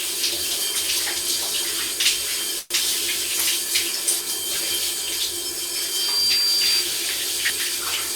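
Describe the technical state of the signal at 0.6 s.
At 0.6 s the signal is intact, with no audible technical fault in the sound at that moment.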